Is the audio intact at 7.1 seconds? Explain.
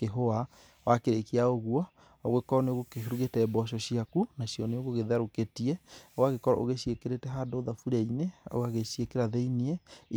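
Yes, at 7.1 seconds the speech plays through cleanly, with no dropout, click, distortion or other fault at that moment.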